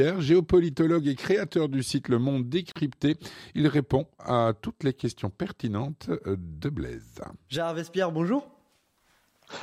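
At 2.72 s the sound drops out for about 39 ms and returns at 2.76 s, picking up exactly where it stopped. Both edges are softened, as codec processing blurs a hard cut. This is a gap at a join of encoded pieces: separate segments were encoded independently and spliced untrimmed, so each run's leading encoder delay and final-frame padding survive as silence inside otherwise continuous audio.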